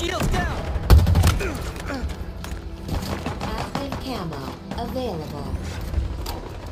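Nothing is technically wrong with this audio.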